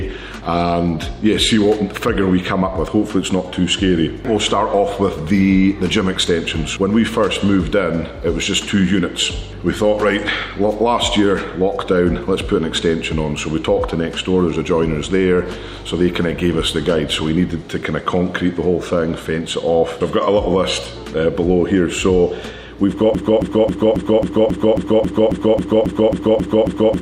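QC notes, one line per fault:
23.15–27.02 s, broken-record loop: from 23.15 s to the end of the clip, a short fragment of about 271 ms (roughly a quarter of a second) plays back to back 14 times, each repeat identical, giving a stuck, stuttering pulse in place of whatever should have followed. The likely cause is a player, encoder or stream that stalled and kept resending the last chunk it held, so the intended audio for those final seconds never arrives.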